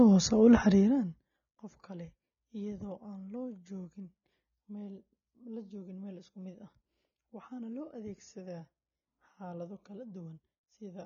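Throughout the recording, the speech has most likely passed through AAC compression at a low bitrate, with a damage level that fits something around 24 kbps AAC-LC. With so few bits, the encoder quantises the spectrum coarsely and discards everything above about 6.9 kHz. The result is plainly audible: the speech sounds dull and muffled, sibilants turn fizzy and smeared, and sustained vowels take on a warble.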